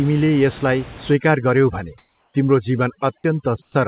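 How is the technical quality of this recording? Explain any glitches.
The recording has processing faults. Room noise sits about 19 dB below the speech, and nothing is present above 4 kHz, which fits a narrowband telephone codec such as G.711.

From 1.14 s to the end there is overdone noise removal. Bands near the noise estimate are cut hard, so the background drops and breaks up into twinkling specks. A spectrogram shows a speckled, hollowed background.

Comfort noise replaces the background at 1.98 to 2.34 s and at 3.62 to 3.74 s, likely from discontinuous transmission. The detailed background becomes steady, featureless noise, about 1 dB and 4 dB quieter, and appears on a spectrogram as an even grey wash.

At 3.22 s there is an onset clipped by the voice detector. A slow detector likely dropped the first 20 ms, so the sound starts abruptly, showing as a sharp vertical edge in the waveform.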